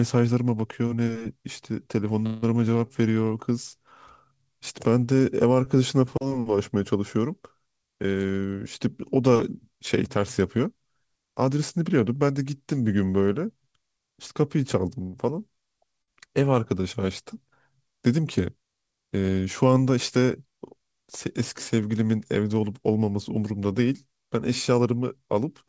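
At 2.26 to 2.44 s and again at 15.02 to 15.17 s comes a call audio freeze: the last sound hangs as a fading buzz, likely from held-up packets draining the jitter buffer, and then resumes with nothing lost, unlike a dropout. Shorter stalls from a late packet at 5.06 to 5.09 s and 16.02 to 16.10 s just stretch one sound briefly with a slight buzz or dip. At 19.65 to 19.97 s and 24.72 to 25.64 s, jitter buffer speed-up plays the audio about 10% faster at unchanged pitch, trimming roughly 40 ms and then 100 ms, so it sounds hurried rather than gapped. Throughout, the G.722 call path leaves nothing above 8 kHz.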